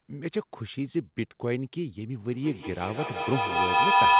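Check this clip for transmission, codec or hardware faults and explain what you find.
One fault is present: a feedback howl, heard through a narrowband call path with nothing above 4 kHz. From 2.3 s to the end, a microphone-loudspeaker loop builds a howl near 1 kHz, with the loop repeating about every 150 ms and peaking about 11 dB above the speech. On a spectrogram it shows as a bright horizontal line.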